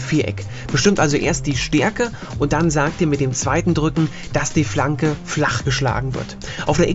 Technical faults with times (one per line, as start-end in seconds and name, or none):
none